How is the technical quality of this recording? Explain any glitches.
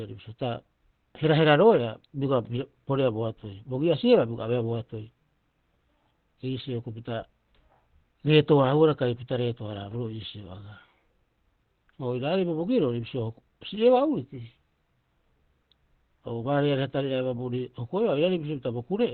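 Quality's fairly poor: it's held back by one fault running the whole way through. Throughout, there's plainly audible Opus compression: nothing above about 4.2 kHz, so the speech sounds muffled and hoarse. That narrowband, dull character fits the encoder's speech (SILK) mode at a very low rate, likely around 16 kbps.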